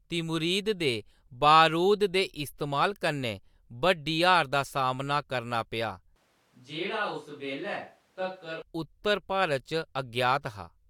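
From 6.16 to 8.62 s the close microphone likely drops out, leaving a switch to a distant microphone. The speech turns abruptly roomy, hollow and thin in the bass, about 10 dB quieter, with room noise around 35 dB below it, then snaps back.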